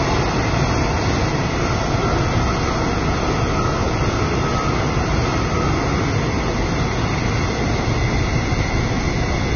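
Heavy low-bitrate encoding, likely Vorbis compression at a rate that fits something around 20 kbps, affects the whole of this sound recording. The encoder has discarded everything above 6.5 kHz and quantised the remaining upper band so coarsely that its fine detail is replaced by noise of similar energy. The result is a dull top end overlaid with hissy, grainy texture, tones that sound roughened, and transients whose attacks are smeared rather than crisp.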